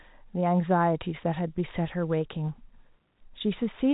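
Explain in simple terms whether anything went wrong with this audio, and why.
Nothing went wrong here; the speech has just come through ordinary landline telephone coding, which keeps nothing above about 3.8 kHz, so the narrow, phone-like sound is simply what that kind of line is meant to deliver.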